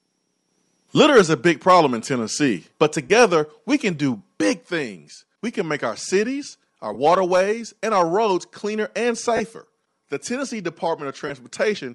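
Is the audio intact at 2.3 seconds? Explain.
No. At 2.3 seconds the speech carries a breathy, grainy edge with a hazy, noise-filled top end, and this damage is plainly audible across the whole clip, not just at that moment. The likely cause is Bluetooth LC3 compression, a transform codec that clears out much of the upper spectrum and fills it with synthetic noise. The texture fits 10 ms frames at a bitrate around 48 kbps.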